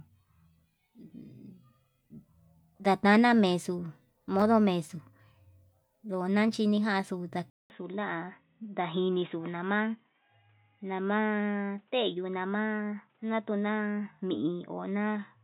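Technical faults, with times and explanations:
7.5–15.43 s, input switched to a poorer device: after a 200 ms silence, the speech turns dull and boxy, with nothing above 3.8 kHz and faint new background noise around 45 dB down, likely from a narrower-band microphone. A spectrogram shows the upper band abruptly empty, and the waveform a brief flat gap.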